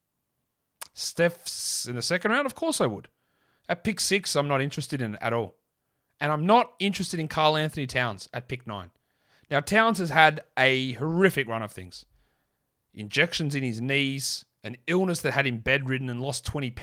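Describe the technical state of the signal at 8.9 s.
Right around there, just after "at pick", there's a lost packet rebuilt from error correction, running 8.83 to 8.85 s. It sounds like one packet went missing, and the decoder filled those 20 ms with the lower-bitrate backup copy carried in the next packet. So there's no gap, just a brief rougher, noisier patch in the speech.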